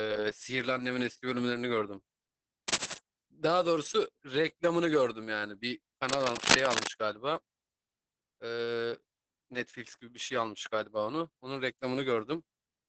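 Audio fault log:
throughout: Opus voice compression. The speech sounds muffled and a little hoarse, with a faintly robotic edge, and there's nothing at all above about 8.5 kHz, so the top end just stops. That's the SILK linear-prediction coder in wideband mode working hard: the excitation is coded coarsely, which produces the rough, buzzy texture. The damage is heavy, consistent with a bitrate of around 10 kbps and 20 ms frames.
2.68–2.98 s and 6.09–6.88 s: cable scratch noise. Two bursts of dense, uneven scratching sit over the speech. The first is short and roughly as loud as the speech. The second lasts nearly 0.8 s and is somewhat louder than the speech. The ragged, crackly rustle is likely a worn cable, connector or control being moved, so its contact resistance jumps around rapidly and spits noise into the signal.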